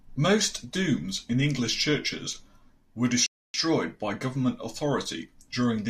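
At 3.26 s the speech drops into a rebuffering stall lasting until 3.54 s: playback ran dry of downloaded audio and halted while the stream refilled, adding 278 ms of dead air. The sound resumes exactly where it stopped, so nothing is missing, just an abrupt pause mid-flow. On a waveform this is a flat line splicing two untouched segments; a spectrogram shows a clean, fully dark vertical band with no smearing at either edge.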